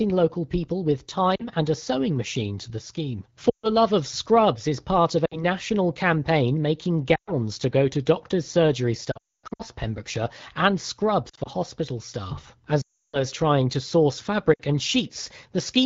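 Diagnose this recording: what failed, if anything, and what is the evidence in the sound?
Lost AMR speech frames from radio errors on the network link made the AMR-WB decoder repeat its last pitch and vocal-tract settings at falling gain. This causes dropouts at 1.35–1.45, 3.49–3.71, 5.25–5.44, 7.16–7.34, 11.29–11.49 and 14.54–14.61 s, and drops to near silence after "go to doctors' surgery" (9.11–9.62 s) and at 12.81–13.18 s.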